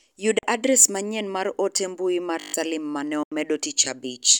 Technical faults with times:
0.38-0.43 Bluetooth dropout
2.40-2.54 system hang loop
3.23-3.32 Bluetooth dropout

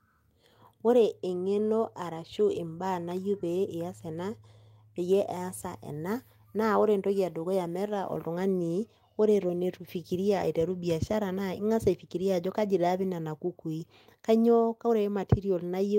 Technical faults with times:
none

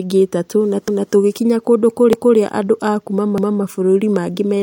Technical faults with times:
0.88-1.13 overlapping chunks
2.13-2.38 overlapping chunks
3.38-3.63 overlapping chunks

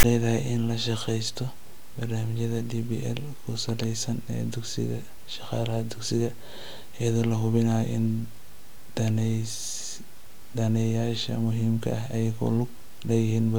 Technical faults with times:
0.00-0.04 file tags played as audio

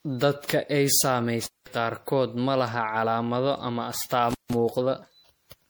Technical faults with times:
0.00-5.70 generation loss
1.43-1.66 intermittent contact
4.30-4.54 intermittent contact

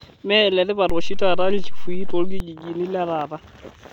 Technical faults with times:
0.90-2.40 DC step

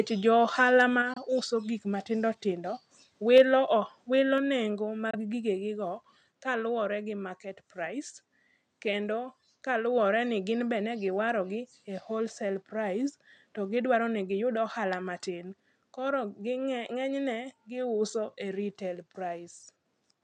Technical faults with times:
0.80 microphone overload
1.02 microphone volume stepped down
1.13-1.18 Bluetooth dropout
3.36-3.42 microphone overload
3.38 microphone volume stepped down
4.38 microphone volume stepped down
5.11-5.15 Bluetooth dropout

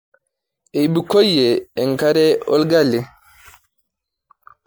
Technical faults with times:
0.00-4.66 generation loss

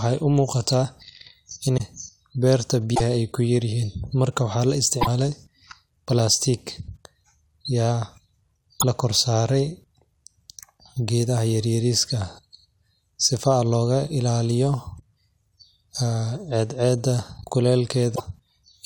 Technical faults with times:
1.76-1.81 broken MP3 bit reservoir
2.94-3.01 broken MP3 bit reservoir
5.00-5.07 broken MP3 bit reservoir
8.79-8.84 broken MP3 bit reservoir
18.14-18.20 broken MP3 bit reservoir

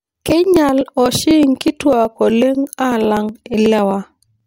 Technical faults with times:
0.07-4.40 periodic USB or driver dropouts

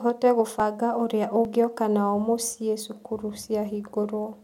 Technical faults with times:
0.60 dropped buffer (overrun)
1.45 dropped buffer (overrun)
3.43 dropped buffer (overrun)

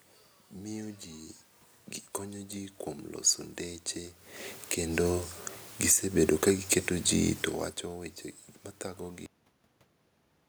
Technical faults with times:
4.56-4.88 automatic gain falling
4.79-5.32 automatic gain rising
5.75-6.71 automatic gain falling
5.97-7.58 automatic gain rising

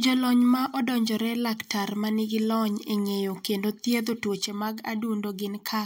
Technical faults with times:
4.39-5.85 sudden gain jump

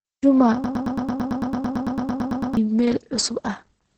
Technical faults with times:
0.00-3.97 Opus compression
0.64-2.57 broken-record loop

